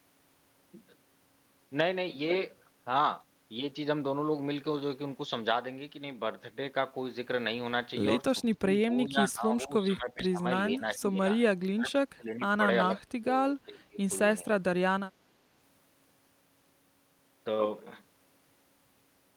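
Speech suppressed in double talk recurs at 8.57–10.44, 10.78–11.21, 11.74–12.6, 12.89–13.34 and 13.65–14.0 s: the speech dips by something like 15 to 25 dB and breaks into pieces, likely because an echo canceller, facing simultaneous talk, mistook it for loudspeaker echo and attenuated it.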